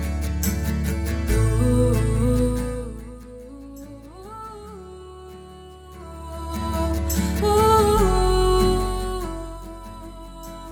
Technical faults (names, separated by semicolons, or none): none